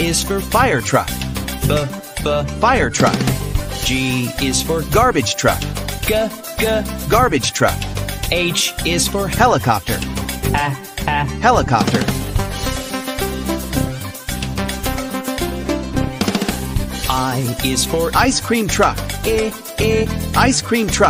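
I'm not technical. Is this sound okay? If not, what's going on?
Yes, nothing here needs fixing, so the sound is fine as it is.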